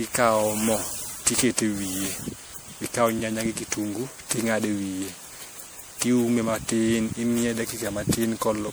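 From start to finish the speech carries generation loss, most likely from being decoded and re-encoded with a lossy codec around ten times, with a character that points to MP3 at about 96 kbit/s. Each pass re-quantised the signal on a shifted frame grid, so quantisation noise and missing spectral bands piled up. The sound is swirly, smeared and hollow, more degraded than that bitrate alone would give, and consonant attacks are blurred.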